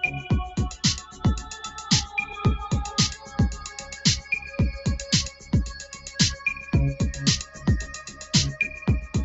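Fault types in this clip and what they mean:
Noise suppressor applied to music or sounds: a suppression stage built for speech stayed active on this sound and treats its sustained tones and decays as noise. Its gain keeps shifting by roughly 10 dB, so held parts sink while onsets survive, and the sound pumps and thins.
Sound cut by the noise suppressor: at six moments the suppressor judged the material to be noise and clamped it harder than elsewhere. Each dip lasts about 0.2 to 0.3 s, between 1.04 s and 8.29 s, pulling the level down by about 6 to 9 dB.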